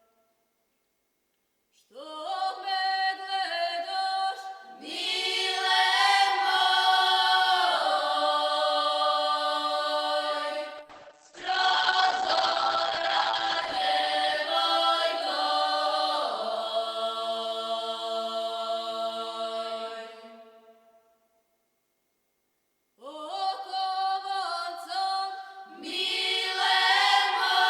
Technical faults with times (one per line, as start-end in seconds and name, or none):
10.78-15.67 call bitrate drop